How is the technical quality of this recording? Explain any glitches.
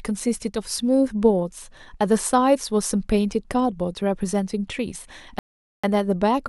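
The recording has one clear glitch, a rebuffering stall near the end. From 5.39 s to 5.84 s the speech stops dead and the audio falls silent. Then it picks up exactly where it left off. The player had used up its downloaded audio and had to wait for more to arrive. No speech is skipped or lost. The stall simply inserts a gap of about 0.45 s.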